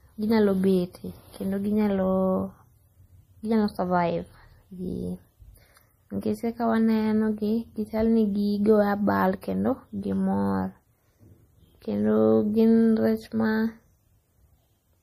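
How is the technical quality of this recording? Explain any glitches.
The recording has audible compression damage throughout and one short pre-echo.

MP3 compression, throughout: nothing is present above about 15.2 kHz, and the codec damage is plainly audible, with the watery, swirly texture of weak frequency lines dropping in and out from frame to frame. The likely cause is an MP3 encoder short of bits, which fits a low bitrate of around 40 kbps. Starved of data, the encoder cuts the treble at a fixed point and discards quiet detail, so s sounds turn metallic and attacks smear.

Pre-echo at 9.41 s, just before "kendo gimor": a brief hiss lasting about 16 ms comes just ahead of a sharp onset. The transform coder spreads its quantisation noise across the whole block. Because the attack falls late in that block, noise sized for the loud moment spills into the near-silence before it, and the onset itself sounds softened.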